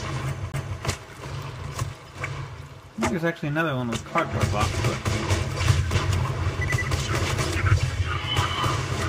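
Two CD skips break the audio. The first runs from 0.52 to 0.54 s, and the second comes at 5.94 s. Each is a brief mute with a tick, and the sound then resumes from a different point. The first mute lasts about a fiftieth of a second. The second is shorter still. The cause is the laser jumping to another turn of the disc's spiral after a knock or a surface flaw.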